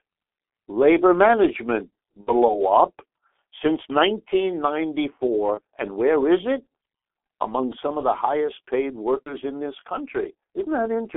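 Throughout, the speech carries the sound of the G.723.1 codec. Nothing gets through below about 300 Hz or above 3.5 kHz. The heavy coding damage, which fits the 6.3 kbit/s mode, leaves the voice hoarse and muffled, with smeared consonants. A plain telephone band-limit would narrow the sound but keep it clean. Here the slowly updated voice model adds a rough, grainy texture on top of the narrow band.

VoIP packet loss concealed by the speech codec appears three times: from 2.21 to 2.33 s, about two 30 ms frames' worth; from 5.54 to 5.60 s; and from 9.25 to 9.34 s. At each, the decoder fills the missing frames by repeating its last pitch and filter at falling gain. The result is a brief buzzy, stretched tone or coloured noise that fades, and the voice stays weak for a moment afterwards. A simple dropout would instead leave silence or a click.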